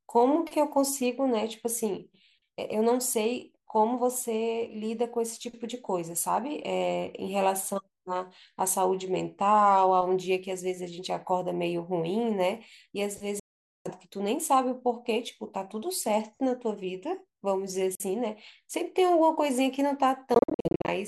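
At 13.40 to 13.90 s the speech cuts to silence for about half a second. A shorter hole follows at 17.95 to 18.04 s. Between 20.34 and 20.90 s the sound breaks up into a stutter of brief gaps, none longer than about 46 ms. This is likely a Bluetooth dropout: packets missed their deadline on the wireless link and were discarded. Speech resumes further along, as if it had kept playing, rather than pausing and picking up where it stopped.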